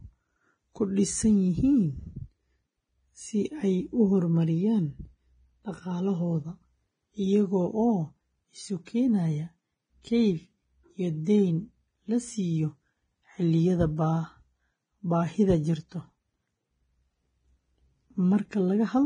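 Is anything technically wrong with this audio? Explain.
Yes. Two faults are audible in this speech clip.

Throughout, the sound carries heavy lossy-codec damage, most likely Vorbis compression. Nothing is present above 9.7 kHz. The codec keeps a smooth spectral outline and spends very few bits on the detail above it. So the treble detail turns into noise of similar energy. The speech sounds hissy and grainy, with rough tones and soft consonant edges. The damage fits a low bitrate of around 21 kbps.

At 8.85 s there is pre-echo. A sharp attack lands late in a coding block. The codec spreads its quantisation noise across the whole block, sized for the loud part. That noise spills into the quiet gap before the attack, about 18 ms ahead of it. You hear a brief hiss just before the onset. The attack itself sounds smeared rather than crisp.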